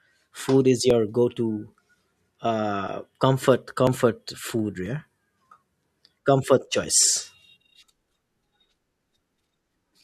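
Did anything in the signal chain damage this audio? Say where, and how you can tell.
Yes, periodic USB or driver dropouts at the driver stage: ticks every 0.99 s from 0.90 to 9.82 s, each skipping around 10 ms of speech as something blocks the bus.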